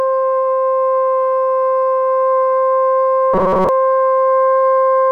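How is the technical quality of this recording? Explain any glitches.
The recording has one clear glitch: a stretch of robotic sound from repeated short buffers between 3.34 and 3.69 s. The music there turns into a stiff, metallic buzz pitched at 188 Hz. The likely cause is new audio arriving too slowly, with playback looping a fragment of about 5.3 ms to fill the gap while most of the real material in that span is skipped. Because every loop has the same length, the buzz holds one fixed pitch even as the underlying music moves. That steady, machine-like tone sets it apart from a plain stutter or dropout, which would sound like audible gaps or a choppy, irregular repeat rather than a continuous pitched drone.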